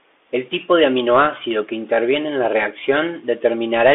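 From start to finish the speech sounds thin and boxed in, confined to roughly 300 Hz to 3.5 kHz, with scratchy s sounds and a granular hiss underneath. This is Bluetooth CVSD headset codec damage. The one-bit delta coding, which fits a 64 kbps link, cannot track fast high-frequency movement and distorts it.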